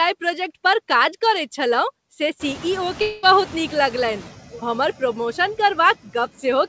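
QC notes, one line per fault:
Throughout, noise suppressor artifacts: background is pulled down about 9 dB in gaps and swells under speech; spectrogram shows patchy residual noise between syllables.
2.39–4.30 s, noise suppressor catching up: after "काज करैत छलहुँ से" the room noise jumps about 21 dB; reduction lags, about 5 dB, settling over 1.9 s; spectrogram shows a broadband floor fading down.
3.02–3.26 s, long network dropout: about 0.21 s of audio is lost and filled with a decaying buzz or hiss continuing the last sound, likely a network gap; waveform shows a smeared, fading stretch, then resumed speech.
4.51–4.62 s, sudden gain jump: just before "हमर प्रमोशन" speech and noise drop together by about 17 dB in one step, likely an unramped gain change; waveform shows an abrupt envelope cliff.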